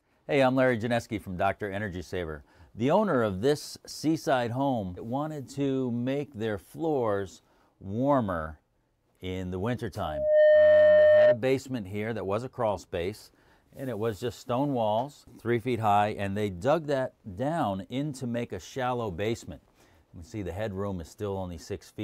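A loudspeaker feedback squeal at about 607 Hz swells over roughly 0.4 s from 9.97 s, sits about 10 dB above the audio, and stops at 11.38 s when the mic-to-speaker loop gain drops below one.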